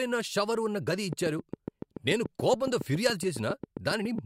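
Speech carries a train of clicks from 1.13 s to 4.19 s: around twenty regular ticks at 7.2 per second, peaking roughly 10 dB above the signal. The waveform shows evenly spaced spikes, and the spectrogram shows thin vertical broadband lines. Nearby equipment interference is the likely cause.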